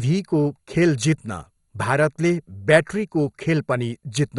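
Speech, and the whole clip carries MP2 compression damage, likely from encoding at a low rate, consistent with roughly 56 kbps. Nothing is left above 11.2 kHz, so the top end sounds dull. The damage is heavy: the encoder has too few bits to share across its 32 sub-bands, so upper bands switch on and off from frame to frame and the remaining ones are coarsely quantised, giving a gurgling, granular texture throughout.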